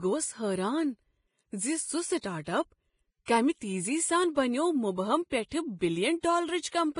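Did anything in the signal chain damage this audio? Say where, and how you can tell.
Yes. At the codec stage, heavy hissy, grainy treble runs throughout with nothing above 10.5 kHz, likely Vorbis compression at a bitrate near 28 kbps.

Pre-echo, also at the codec stage: a 25 ms hiss from 2.21 to 2.23 s precedes an attack, as block-spread quantisation noise fills the quiet lead-in.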